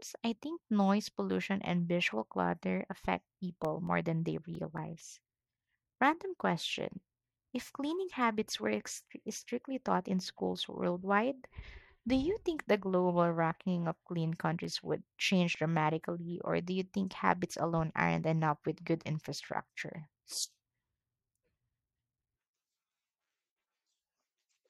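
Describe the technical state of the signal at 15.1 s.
At 15.1 s the speech carries CD scratch ticks (14.64–16.0 s): seven brief ticks where an unrecoverable, disc-rotation-synchronous defect forces concealment, showing as thin vertical spectrogram lines and brief waveform gaps.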